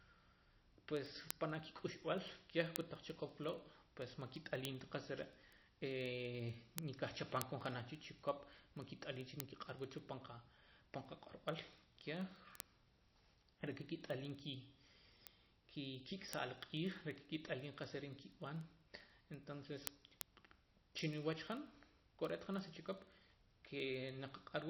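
Throughout, the speech sounds watery and swirly with nothing above 5.8 kHz, likely MP3 compression at a low bitrate; unlike plain low-pass filtering, the remaining band flickers between frames.

From 0.14 s to 24.67 s, sharp word clock ticks of uneven strength repeat about every 0.05 s. Two unlocked clocks drifting roughly 400 ppm apart drop or repeat single samples. Their steady rate distinguishes them from random digital clicks.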